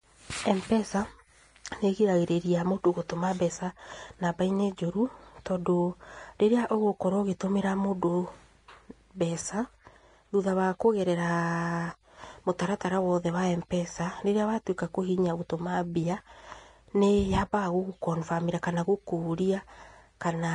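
A speech recording carries plainly audible damage from start to finish, most likely Vorbis compression at a low setting, which fits a bitrate around 32 kbps. The treble sounds hissy and grainy, with roughened tone and softened consonant attacks, because fine high-frequency detail has been replaced by noise of similar energy. On a spectrogram the energy stops flat at about 10.6 kHz, and the band below that cut-off looks speckled and smeared rather than cleanly striated.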